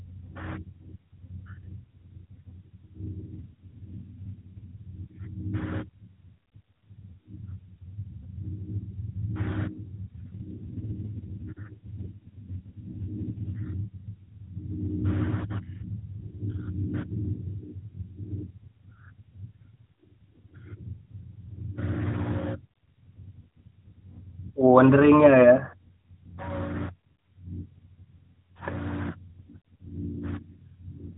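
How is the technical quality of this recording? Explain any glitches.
The speech passes through an AMR narrowband mobile codec, so nothing above 4 kHz survives, and it has two AMR rate drops. From 3.24 to 4.75 s and again from 10.26 to 13.66 s, the radio link appears to force the codec into a lower mode, consistent with a step from 12.2 to 5.9 kbps with the freed bits spent on error protection. With fewer bits for each 20 ms frame, the voice turns rougher, buzzier and more synthetic. The bandwidth stays the same and no gap opens, and the clearer sound returns once the rate climbs back.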